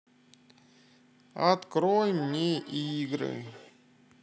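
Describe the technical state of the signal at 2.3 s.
At 2.3 s you're inside a stretch of feedback echo between two devices, running from 1.9 to 3.75 s. A second device in the room plays the call back, this mic catches it, and the echo canceller can't remove it. The sound comes round again roughly every third of a second, thin and ringing, peaking about 19 dB under the speech.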